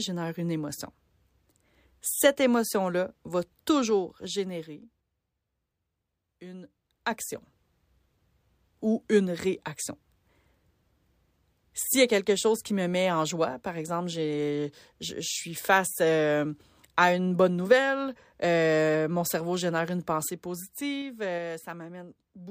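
From 3.72 to 5.29 s the level drops by roughly 15 dB in 3 dB steps, a few per second, and from 6.60 to 7.48 s it climbs back about as far, faster. From 20.11 to 21.50 s it falls roughly 10 dB again. Each time this is zipper noise: the gain jumps without smoothing, so every step leaves a small click, a ticking over the speech.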